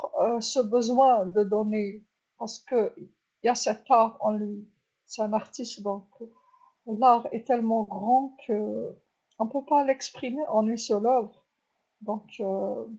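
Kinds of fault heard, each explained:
Short concealed packet loss: Twice, about 40 ms of the call audio failed to arrive at the decoder in time, at 1.27 to 1.33 s and at 7.83 to 7.89 s. Each time the receiver patched the gap by extending the preceding sound, carrying its pitch forward or substituting shaped noise, then crossfading back to the real signal. Each patch is heard as a brief smear or wobble, and a short consonant there may be lost.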